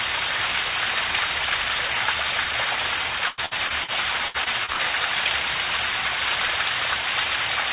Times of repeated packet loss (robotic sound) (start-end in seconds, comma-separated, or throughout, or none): 3.28-3.90, 4.28-4.81